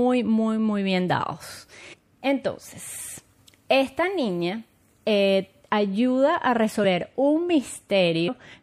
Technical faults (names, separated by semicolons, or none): MP3 compression; compressed frames skipped